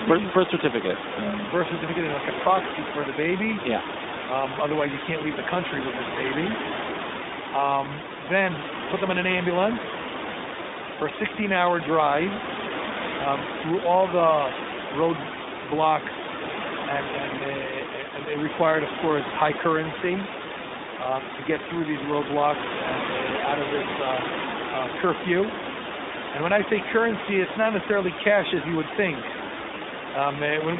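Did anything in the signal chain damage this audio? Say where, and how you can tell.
Yes. The damage is in the codec stage: the speech passes through an iLBC codec for the whole clip, its pass-band limited to about 200 Hz to 3.7 kHz. Each independently coded frame, consistent with 20 ms frames in the 15.2 kbps mode, leaves plainly audible roughness and a synthetic buzz, smearing the room noise sitting about 9 dB below the speech.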